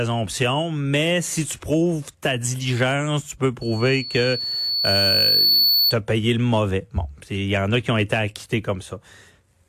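From 3.61 to 5.95 s, after "ta diligence tu peux", loudspeaker feedback squeal rings at 4.4 kHz. The mic-speaker loop exceeds unity gain. The tone swells over about two seconds, ending before "as payé le mauvais".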